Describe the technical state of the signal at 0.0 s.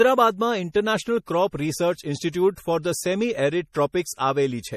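At 0.0 s the speech is already carrying MP3 compression, which runs through the whole clip: a starved encoder, likely one working at around 40 kbps, has cut everything above 15.1 kHz and is dropping weak frequency lines frame to frame, leaving a plainly audible watery swirl and smeared consonant edges.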